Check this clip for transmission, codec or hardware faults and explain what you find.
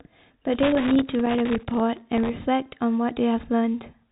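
Two hardware-side faults stand out, both crackles but with different causes; the telephone-band coding underneath, cut off near 3.8 kHz, carries the speech cleanly.

From 0.54 to 1.80 s there is loose connector crackle. A worn or dirty contact is making and breaking as it shifts, chopping the signal. It sounds ragged and irregular, with scratchy bursts at uneven spacing that track physical movement rather than any steady timing.

From 1.93 to 2.29 s comes processor overload crackle. The processor repeatedly fails to deliver tiny audio buffers, under a millisecond each, and each miss leaves a hard-edged gap of silence. Some thirty dropouts in quick succession form a dense, even gritty tearing that stops cleanly once the load passes.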